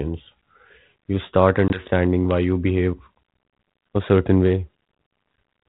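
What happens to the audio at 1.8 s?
At 1.8 s the speech is recovering from packet loss on an ADPCM call, spanning 1.68 to 1.81 s. Right after "you start", about 20 ms of audio, likely a single packet, drops out as a hard-edged silent gap. The G.726 decoder at 32 kbit/s then resumes with its adaptive predictor and step size out of step with the sender's. The sound comes back slightly distorted. It settles before "why you behave".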